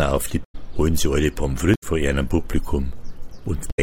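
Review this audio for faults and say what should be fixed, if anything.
Damaged data in a compressed stream occurs at 0.43–0.55 s, 1.71–1.83 s and 3.67–3.79 s, each lasting about 0.12 s. Corrupted bytes make the decoder misread frames, lose sync and hunt for the next header, producing a brief chirp, squawk, click or short hole. Delivering the file over a checksummed transfer and verifying its integrity before decoding would prevent it.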